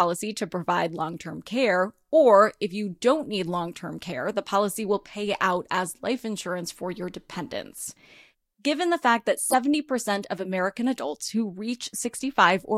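A short glitch cuts through the speech from 9.50 to 9.56 s, lasting about 50 ms and peaking fairly loud, around -15 dBFS. This is a corrupt frame decoded: bits inside a couple of compressed frames were damaged, yet the decoder played them anyway. The misread gains and codes sent energy to frequencies that don't belong to the signal, and the result is a brief glitch lasting only as long as those frames.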